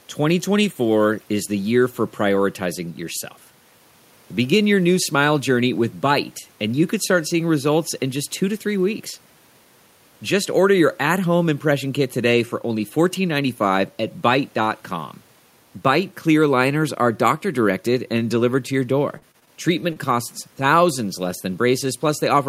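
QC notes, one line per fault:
19.09–19.49 s, repeated packet loss (robotic sound): packets kept failing to arrive in time, leaving four holes totalling about 100 ms, the longest 40 ms. Each was patched by extending the preceding speech, so about a quarter of this stretch is synthetic, giving choppy speech with fragments missing.
19.93–19.97 s, short concealed packet loss: about 20 ms of audio never reached the decoder, and the receiver bridged it by continuing the last sound for roughly 27 ms before blending back. The result is a brief smear or wobble, and a short consonant there can disappear.
19.95–19.97 s, 20.03–20.05 s, 20.11–20.13 s, lost packet rebuilt from error correction: three separate 20 ms packets were lost, but each following packet carried a low-bitrate backup copy that the decoder played instead. There is no gap, but each of these moments sounds rougher and noisier.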